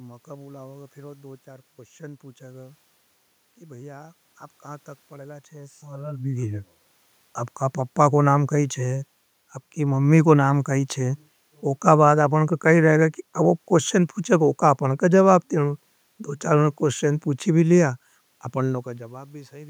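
No technical faults are present.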